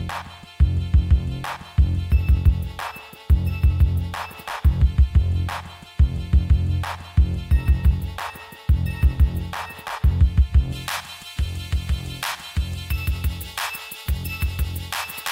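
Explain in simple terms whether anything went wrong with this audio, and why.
De-emphasis applied wrongly, from the start to 10.72 s: a treble-cutting filter, meant only to undo a matching treble boost, was used on audio that never had that boost, or was used twice. The high frequencies fade away gradually, so the sound comes across dull and muffled.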